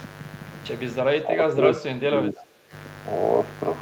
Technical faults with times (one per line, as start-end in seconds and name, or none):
0.00-3.81 mains buzz
1.14-2.73 speech suppressed in double talk